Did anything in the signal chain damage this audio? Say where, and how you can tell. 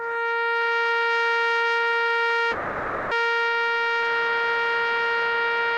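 Yes. From 2.51 to 3.14 s the music stalls into a smeared, fading continuation of its last sound for about 600 ms, then resumes exactly where it left off with nothing skipped. This call audio freeze points to the network stage: packets were likely held up in transit, the jitter buffer emptied, and the receiver filled the wait, leaving the rest of the clip running about 600 ms late.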